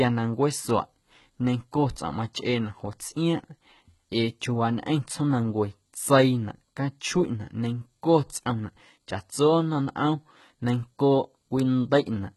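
Throughout the speech, the audio was likely passed through heavy HE-AAC compression at a rate that fits about 16 kbps. Only the lower spectrum was coded, and the treble was rebuilt from copied lower bands. Nothing remains above 11.8 kHz, and s sounds turn gritty, lispy and metallic.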